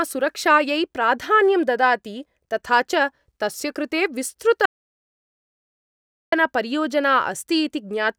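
At 4.66 s the speech cuts to dead silence, no room tone, until 6.32 s: an audio dropout to silence, likely a lost input link.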